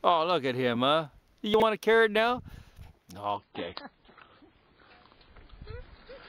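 At 1.54 to 1.62 s, the chunks play out of order. A short slice of sound, about 20 ms long, arrives three chunks late and plays after the material that should follow it. Nothing goes missing, but the three hard joins produce a brief jumbled stutter.

From 3.37 s to the end, the adaptive stream drops to a lower bitrate. The quality changes abruptly with no gap. Everything above 5.1 kHz vanishes, leaving the sound dull and smeared with codec artefacts. This points to an MP3 stream falling from around 128 to 16 kbit/s.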